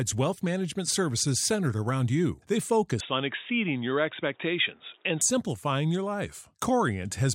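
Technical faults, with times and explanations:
3.01–5.21 s, input switched to a poorer device: from 3.01 s, just before "simplifying your", the speech turns dull and boxy, with nothing above 3.8 kHz, then clears again at 5.21 s. There is no gap at either switch and loudness stays about the same. A faint new background noise, roughly 40 dB under the speech, sits under this stretch. The likely cause is the recording input changing to a narrower-band microphone or headset profile. On a spectrogram the upper band is cut off flat for that span, while the waveform's envelope stays steady.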